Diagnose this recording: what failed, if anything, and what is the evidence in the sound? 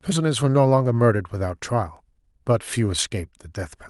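Nothing failed; the call path carried this speech normally.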